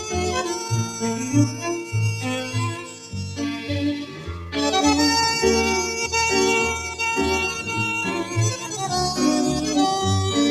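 A noise suppressor built for speech was left running across the whole clip, so this is a noise suppressor applied to music or sounds. It mistakes sustained, steady content for background noise and keeps pulling it down, while onsets pass largely intact. The result is a level that breathes and pumps, with gain swinging by roughly 5 dB as held material and decays are repeatedly turned down and released.

In four places the suppressor bites harder, and the sound is cut by the noise suppressor. From 0.59 to 1.02 s it drops by up to about 6 dB. From 2.74 to 3.15 s it drops by about 9 dB, the deepest dip. From 4.06 to 4.54 s it drops by about 6 dB, and from 8.57 to 8.74 s by about 5 dB. Each dip lasts from a brief moment to around half a second. Sustained or fading parts sink and their tails are clipped short, so the sound thins out and hollows before recovering.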